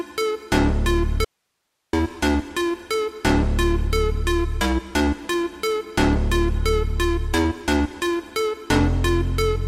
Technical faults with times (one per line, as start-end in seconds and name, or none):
1.25-1.93 audio dropout to a faint residue